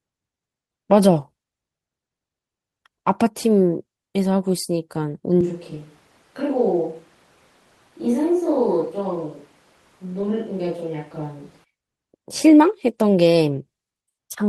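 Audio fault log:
5.41–11.64 s, switch to a distant microphone: the sound abruptly turns roomy and hollow, with thinner bass, a drop of about 5 dB and room noise about 30 dB below the speech. The likely cause is the close microphone dropping out, leaving a farther pickup, until an equally abrupt return.
10.21–10.24 s, short concealed packet loss: 20 ms of audio did not reach the decoder in time. The receiver filled 10 ms by extending the preceding sound, then blended back into the real signal, heard as a brief smear within the distant-microphone stretch.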